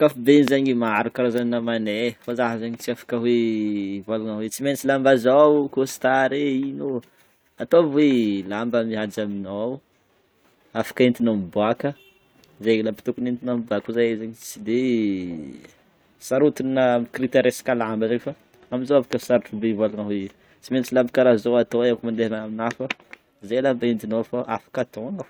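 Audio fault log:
0.48 s and 19.13 s: loud pop. Each is a single sharp pop lasting about 20 ms, roughly 20 dB and then 15 dB above the speech, which carries on beneath. It is likely a brief voltage pulse from a plug, switch, static or driver glitch added to the signal.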